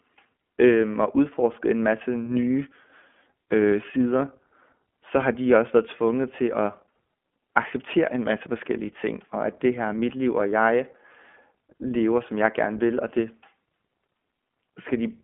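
Throughout the speech, the iLBC codec audibly damages the signal. Each 20 ms frame is coded independently, giving a rough, synthetic edge, consistent with its 15.2 kbps mode. The telephone band runs roughly 200 Hz to 3.4 kHz, with nothing above 3.7 kHz.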